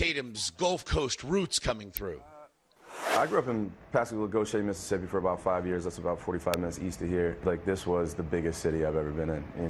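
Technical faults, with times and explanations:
1.97 s and 6.54 s, electrical switching spike: a nearby switch, motor or static discharge most likely arced briefly, and the audio line picked up that burst of interference. Each event lasts only about a millisecond and sits on top of the sound as a sharp snap, the first peaking around -10 dBFS and the second louder, near -5 dBFS, so the later one cuts through more noticeably.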